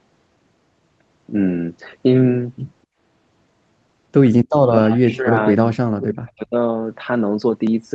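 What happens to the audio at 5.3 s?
At 5.3 s the speech is caught in a dip from 4.77 to 5.36 s, likely speech suppressed in double talk. The echo canceller pulled it down by roughly 20 dB, leaving a shrunken waveform and faded spectrogram.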